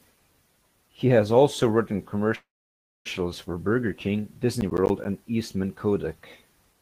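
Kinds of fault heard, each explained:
Call audio freeze: at 2.35 to 3.07 s, just after "has also written", the speech stops and holds for about 0.7 s, mostly silent for roughly 0.59 s. This is likely packets stalling in transit until the jitter buffer ran dry. The speech then resumes where it left off, late but intact.
Processor overload crackle: from 4.61 to 5.05 s the speech is torn by a rough crackle. The processor is missing its deadlines for small audio blocks, around 10 ms each, roughly seven over the stretch. Each missed block drops out as a hard-edged bit of silence.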